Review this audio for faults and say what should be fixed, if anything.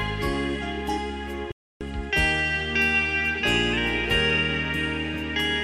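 A digital broadcast dropout mutes the sound from 1.52 to 1.81 s after a 3 ms fade, consistent with about nine failed frames. Unlike an analogue fade, it leaves clean silence without hiss, and the sound resumes later rather than continuing from where it stopped. Improve reception margin or add error protection so corrupted frames are recovered instead of muted.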